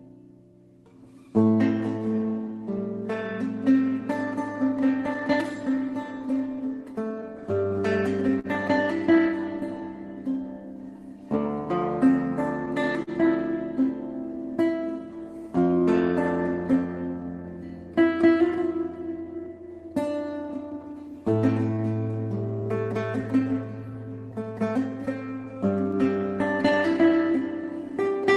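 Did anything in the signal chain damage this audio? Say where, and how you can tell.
Yes. Clock drift between sender and receiver, at the network and buffer stage: the sender's clock runs about 3% slow, so the jitter buffer keeps draining. The receiver has to make up the shortfall, and small timing hiccups recur unevenly through the whole clip.

Repeated timing corrections, in the jitter buffer, from 0.06 s to 27.96 s: the receiver repeatedly stretches short pieces to stay in step, all in the same direction. Playback runs at 98% speed, adding somewhere around 0.7 s overall, heard, if at all, as slight hiccups or a slightly unsteady tempo.

Scattered short gaps, at the network stage, from 2.17 to 5.10 s and from 24.32 to 27.93 s: a handful of packets arrived late, about three in the first stretch and five in the second, the longest hole around 10 ms. Concealment continued the previous sound, leaving brief ticks or smears.

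Short stall from a late packet, in the jitter buffer, at 8.39 to 8.47 s and 13.03 to 13.10 s: each time the buffer ran empty and the receiver held the last sound for 45 ms before resuming. Nothing is lost, but a sound lingers with a faint buzz or dip. The Opus call path itself, whose top end stops near 12 kHz, fits a low bitrate of around 20 kbps.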